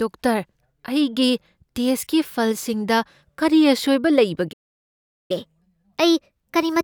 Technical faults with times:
4.52-5.31 playback stall
5.31-6.84 catch-up at higher speed

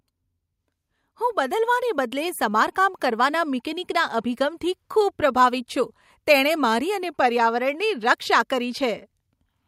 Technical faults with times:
1.03-3.08 automatic gain rising

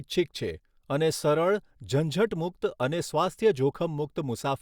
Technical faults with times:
none

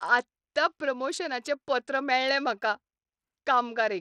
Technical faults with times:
0.00-4.00 Bluetooth SBC compression

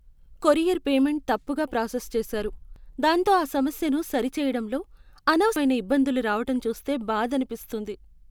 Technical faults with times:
2.76 audio missing between chunks
5.56 audio missing between chunks

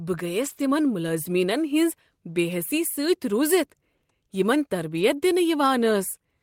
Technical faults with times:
0.41-0.63 lost packet rebuilt from error correction
0.53-0.57 short concealed packet loss
3.97-4.03 short concealed packet loss
4.95-5.01 lost packet rebuilt from error correction

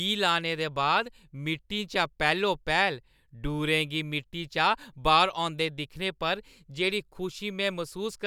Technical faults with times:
none

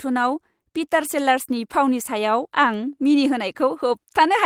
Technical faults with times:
none

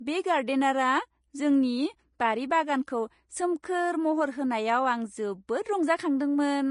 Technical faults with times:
0.00-6.71 Vorbis compression
3.62 pre-echo

